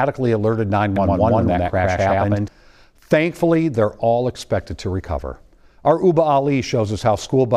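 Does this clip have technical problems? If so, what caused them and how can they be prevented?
Yes: from 0.96 to 2.48 s a doubled audio track appears, an equally loud copy about a tenth of a second behind, cutting in and out abruptly without the decay an echo would have. This is likely a second, slower capture path or an edit holding two offset copies. Prevent it by routing each source through only one path and checking edits for duplicated regions.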